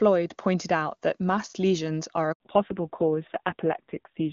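The call was handed from one network to another at 2.32 s, just after "that mass lesions are", and no speech frames arrived during the switch. This handover gap lasts 80 ms, until 2.40 s: the voice dies away almost at once and the line goes silent, so whatever was said in that stretch is simply missing rather than garbled.

When the new link comes up at 2.40 s, the call has fallen back from HD Voice to a narrowband codec, and that holds to the end. Before the switch, the AMR wideband (HD Voice) codec carried clear speech with little or no audible coding damage, consistent with its highest rate. After it, this fallback to narrowband removes everything above 4 kHz. The voice turns muffled and boxy, with a rough, buzzy grain that points to a low AMR-NB rate of around 5.9 kbit/s.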